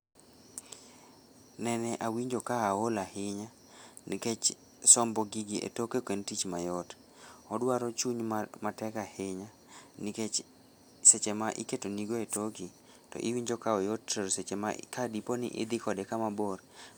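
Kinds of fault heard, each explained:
Nothing in this speech recording stands out as a technical fault, so there's no kind of fault to list here.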